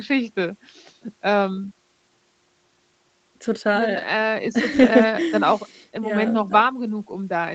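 Speech carried over an Opus call, with a lost packet rebuilt from error correction between 4.75 and 4.85 s. About 60 ms there sounds rougher and noisier, which fits three lost packets replaced by the lower-bitrate copies that later packets carried. On a spectrogram that stretch shows smeared, grainier harmonics, while the waveform stays continuous with no gap.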